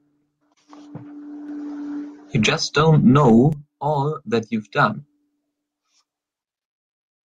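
From 2.73 s to 5.04 s the speech and its background noise swell together by about 5 dB. That is automatic gain rising: the gain control judged the input too quiet and raised its gain over roughly two seconds. The audio also carries call-codec coding noise.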